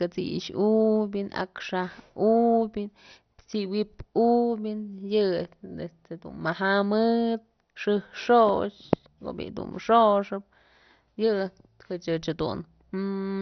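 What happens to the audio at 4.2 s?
At 4.2 s the speech carries the same damage heard throughout the clip, most likely MP2 compression: too few bits left the encoder shutting off upper sub-bands, so nothing survives above 6.1 kHz, with dull, gurgling, granular distortion that fits a rate near 48 kbps.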